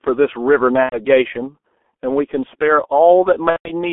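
A speech recording runs through the G.723.1 codec for its whole length, and the damage is heavy. The sound is confined to roughly 250 Hz to 3.5 kHz and has a hoarse, smeared quality. Consonants blur because the coarse 30 ms frames update the vocal model too slowly, which fits a bitrate around 6.3 kbit/s. Simple band-limiting would only muffle the sound. The added roughness and smearing are what point to a low-rate codec rather than a narrow filter. There is also VoIP packet loss concealed by the speech codec, at 0.83 to 0.98 s and again at 3.50 to 3.72 s. The first gap lasts about 90 ms and the second about 150 ms, which fits three and five lost 30 ms frames. During each gap, the decoder keeps repeating its last pitch and filter at falling gain. The result is a fading, stretched sound that is muted from the third lost frame in a row. That stretched, decaying sound is what separates concealment from a plain dropout, and the sound stays weak for a moment after each gap as the decoder recovers.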